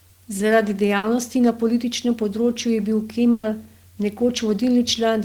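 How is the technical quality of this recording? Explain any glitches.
The speech has two dropouts, both a burst of packet loss. At 0.97 to 1.06 s, and again at 3.31 to 3.46 s, a run of packets never arrived in time, so the receiver stretched the last bit of sound and faded it out. You hear a held, dying buzz or hiss for about 60 ms and then 120 ms. When the speech picks back up, the same length of material is simply gone.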